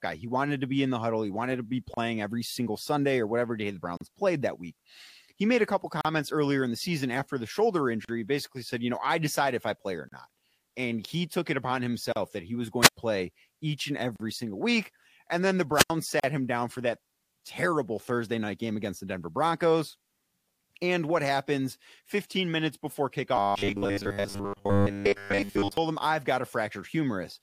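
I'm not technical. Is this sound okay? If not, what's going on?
No, there are three distinct problems in this speech.

First, a gap at a join of encoded pieces: a tiny hole of silence, about 32 ms at 1.94 s and about 38 ms at 3.97, 6.01, 8.05, 10.09, 12.12, 14.16 and 16.20 s. At 6.01 s it falls between "he made a couple" and "earlier in the season", and at 8.05 s between "season after the shoulder" and "basically said you know". The audio was saved in separate two-second chunks and glued together, and each chunk kept a sliver of built-in silence at its edges. What gives it away is the perfectly steady two-second spacing and the short, quiet hole, after which the voice simply resumes.

Second, a wireless microphone squelch dropout at 12.82 to 12.97 s and again at 15.74 to 15.90 s, with the sound muted for about 100 ms and 86 ms. The radio signal from the microphone weakened until the receiver shut its output off. 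Unlike the chunk gaps, these come at irregular moments, a brief swell of hiss or static leads into the hole, and then the voice returns.

Third, robotic sound from repeated short buffers, from 23.36 to 25.77 s. The voice turns into a stiff, metallic buzz pitched at 100 Hz while still loosely following the speech. The playback software was likely getting new audio too slowly and filled the time by replaying its last 10 ms over and over, so most of the real sound in that stretch was skipped. This differs from the other two faults because there's no silence at all, just a continuous mechanical drone.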